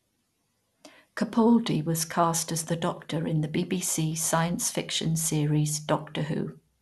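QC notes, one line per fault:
Throughout, MP2 compression: the speech sounds dull and gurgly, with nothing above 12.2 kHz and a grainy edge on the remaining bands. That's the sub-band coder starving the top bands of bits and coarsely quantising what's left, likely from a low rate around 80 kbps.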